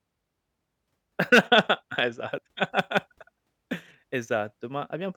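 A short glitch cuts into the speech at 2.34 to 2.38 s, lasting about 44 ms. It comes from damaged data in a compressed stream: corrupted bytes there make the decoder misread frames and lose sync until it locks onto the next valid frame header.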